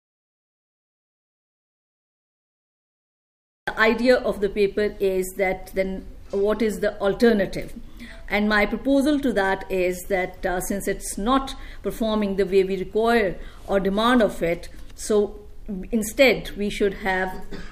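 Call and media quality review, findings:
Audio dropout to silence, 0.00 to 3.68 s, already under way when the clip opens. Silent, no room tone. Sound cuts in abruptly at 3.68 s. Input likely lost through a device disconnect, failed link or mute. Recorder kept writing silence.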